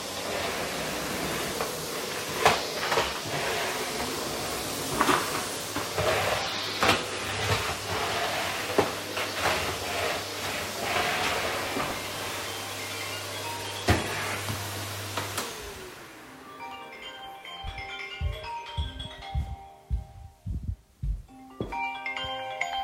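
Periodic USB or driver dropouts run through this sound recording from 10.71 to 17.91 s. Every 0.24 s, something stalls the audio path and around ten milliseconds is skipped outright. That puts about thirty evenly spaced ticks into the sound.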